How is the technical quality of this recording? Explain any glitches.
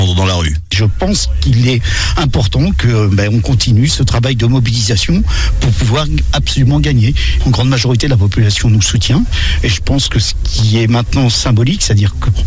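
No glitches: no dropouts, clicks, distortion or timing breaks can be heard anywhere in the recording.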